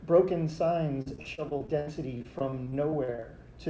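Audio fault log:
1.02 to 3.24 s, repeated packet loss (robotic sound): across this stretch the audio turns choppy, with small pieces dropping out and a buzzy, robotic smear where the last sound is stretched to cover each hole. There are 18 gaps in all, roughly a fifth of the span filled by concealment, and the longest gap is 70 ms. Packets kept arriving lost or late in quick succession, so each patch was followed almost at once by another.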